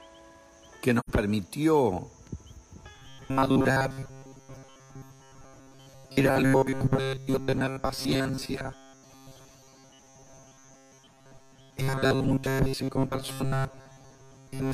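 From 0.99 s to 1.09 s there is an AAC frame loss with muting. For about 85 ms the audio simply goes silent, which fits two lost AAC frames whose spectrum the decoder set to zero. The overlapping transform windows taper the sound out and back in, so the gap has soft edges. That smooth fade is what separates it from a hard dropout or a clipped splice, both of which leave an abrupt edge.

From 2.95 s through to the end, the audio takes on a rigid, metallic buzz fixed at 134 Hz that roughly follows the shape of the sound underneath. The likely cause is robotic sound from repeated short buffers: a fragment of about 7.5 ms is played over and over while fresh audio arrives too seldom, so most of the real material is skipped. Unlike ring modulation or a pitch-shift artefact, the tone stays locked at one pitch while the content stutters forward.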